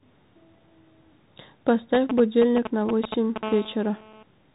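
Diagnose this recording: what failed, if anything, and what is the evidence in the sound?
Codec stage: the Bluetooth CVSD headset codec runs throughout. Its one-bit delta coding, consistent with a 64 kbps link, leaves nothing above 3.8 kHz, so a spectrogram shows a flat ceiling there. A granular hiss floor sits under the speech, and sibilants sound scratchy where the adaptive step cannot keep up.

Analogue wiring: GSM signalling bursts appear from 1.95 to 3.38 s, only a few decibels below the speech. A nearby 2G phone is signalling, and the audio circuit rectifies its radio pulses into galloping clusters of ticks and short 217 Hz buzzes. On a spectrogram these show as grouped vertical striations. In the waveform they are bursts of regular spikes.

Analogue wiring again: GSM phone buzz runs steadily from 3.43 to 4.23 s at about -14 dB relative to the speech. The phone is now in a call, pulsing 217 times a second, and rectification turns this into a raspy buzz. 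A spectrogram shows a dense comb of harmonics spaced 217 Hz apart.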